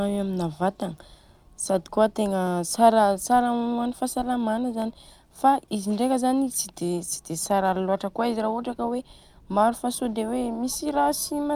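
At 2.47 s and again at 4.82 s, the speech carries a single sharp click. Each is likely caused by dropped samples. A fraction of a millisecond of signal goes missing. The waveform jumps abruptly to a later value, giving a brief broadband tick.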